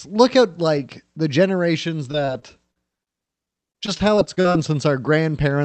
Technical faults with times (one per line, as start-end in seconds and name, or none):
2.11-4.56 repeated packet loss (robotic sound)